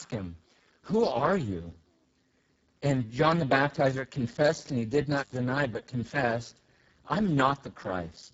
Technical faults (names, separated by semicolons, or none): Speex codec; intermittent contact